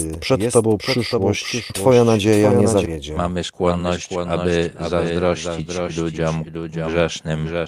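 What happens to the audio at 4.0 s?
At 4.0 s the jitter buffer speed-up is under way, running from 2.95 s to 5.79 s. The receiver's buffer had built up more audio than it wanted, so it cut many short pitch-period pieces in a row, about a third of a second in total. The speech plays at 112% speed with its pitch unchanged and sounds hurried.

Underneath, the doubled audio track continues as it does throughout the clip. A second full-band copy was likely captured again by a slower path, and it trails the original by about half a second at about 5 dB quieter. It is a dry, uncoloured echo of the same speech, with no decay.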